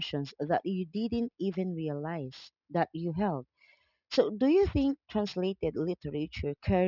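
Speech with aliasing throughout: content above the 6 kHz fold point was mirrored back down instead of being filtered out, consistent with resampling from 44.1 kHz to 12 kHz without an anti-alias filter. Sibilants turn gritty and metallic, with the folded energy roughly 25 dB below the speech.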